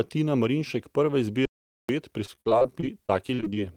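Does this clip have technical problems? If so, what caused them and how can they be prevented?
Yes. From 1.45 to 1.89 s the speech drops to dead digital silence for about 0.44 s, with no room tone, an audio dropout to silence, likely from a lost input connection while recording continued. Secure cables and wireless links, and monitor input levels during capture.

From 2.25 to 3.58 s the speech turns choppy with pieces missing, repeated packet loss, as many short holes up to about 44 ms are patched by stretching previous sound. Use a steadier network, wired if possible, with a larger jitter buffer and forward error correction.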